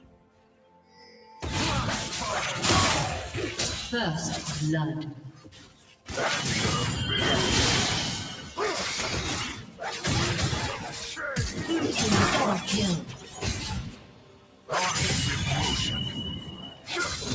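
Throughout, a noise suppressor applied to music or sounds mistakes steady tones for noise. The level swings by about 10 dB: attacks pass while held sound pumps, unlike even compression. Sound cut by the noise suppressor sinks by up to about 10 dB at 0.0–1.38, 5.14–6.1, 8.42–8.58, 9.53–9.81, 10.77–11.19, 13.01–14.71 and 16.4–16.9 s. Held sounds and decays dip rather than dropping out completely.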